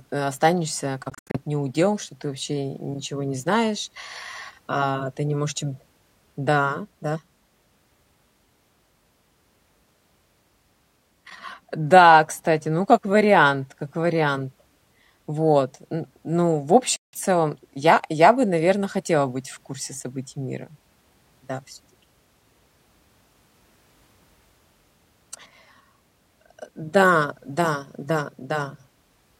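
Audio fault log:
1.10–1.38 s, Bluetooth dropout: the sound breaks into several short silences, about 168 ms missing in total across roughly 244 ms, the longest gap about 76 ms, and it resumes further on as though it had kept playing. Packets likely failed to reach the headphones in time and were discarded.
16.96–17.19 s, Bluetooth dropout: another break with about 168 ms of sound missing, likely from the same kind of late packets being thrown away.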